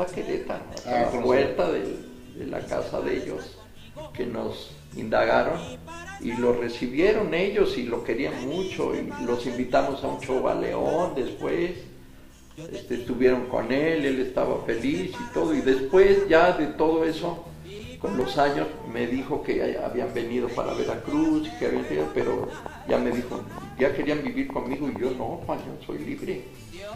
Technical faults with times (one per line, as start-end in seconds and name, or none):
10.86-12.12 CD scratch ticks
17.15-18.21 CD scratch ticks
21.77-24.97 train of clicks